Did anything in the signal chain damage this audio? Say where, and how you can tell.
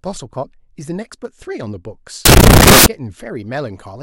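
Yes, at the sample-format conversion stage. From 2.25 to 2.86 s the speech turns into loud, harsh broadband noise: samples built from the wrong bytes, with the reader misaligned or byte-swapped so the jittery low bits become the big part of every value.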